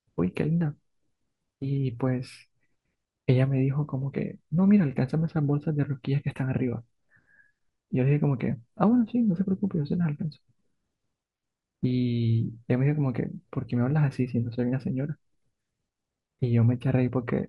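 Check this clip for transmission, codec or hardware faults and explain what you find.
Checking the clip turns up no faults to explain.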